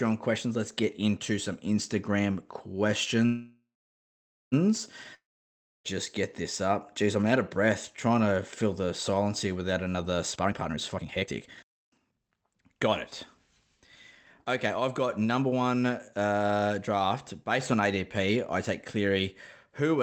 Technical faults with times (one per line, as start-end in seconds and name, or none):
0.00-20.03 sample clock jitter
3.25-4.54 call audio freeze
5.14-5.86 long network dropout
10.35-12.88 jitter buffer speed-up
14.44-16.33 jitter buffer speed-up